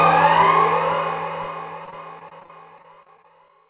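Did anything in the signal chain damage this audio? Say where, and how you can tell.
Yes: repeated packet loss (robotic sound) at the network stage, from 1.85 to 3.5 s, through the narrowband call path that cuts everything above 4 kHz. A rapid series of short holes, the longest about 33 ms, is patched by stretching the previous sound, leaving a choppy texture over roughly 15% of that span.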